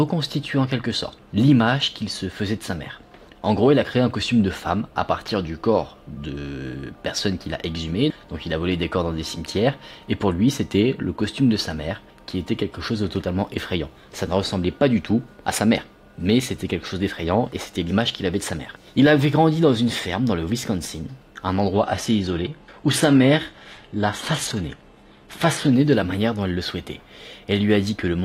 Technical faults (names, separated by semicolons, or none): adaptive stream at a lower bitrate